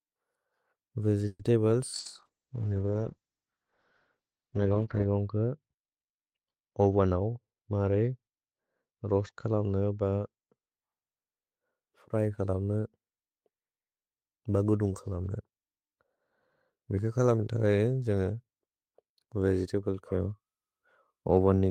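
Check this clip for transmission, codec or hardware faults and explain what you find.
Four faults are audible, all typical of a degraded call path.

From 1.27 to 1.42 s there is a call audio freeze. The sound stretches into a fading buzz or hiss, then about 30 ms of silence. The likely cause is delayed packets draining the jitter buffer. Playback then resumes where it stopped, about 120 ms late.

From 1.99 to 10.77 s there is a call bitrate drop. The encoder coarsens and the top end falls from 20 kHz to 8 kHz. That fits a cut from about 32 to 7 kbps, and the speech sounds muffled and watery, worst for about 3.1 s.

At 1.99 to 2.08 s there is a burst of packet loss. The receiver fills the gap with a decaying continuation, then jumps ahead. About 60 ms of speech is gone.

From 6.83 to 7.53 s there is a jitter buffer speed-up. The receiver trims pitch-period slices to shed built-up delay, about a tenth of a second in all. 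The speech runs at 113% speed with unchanged pitch, so it sounds hurried.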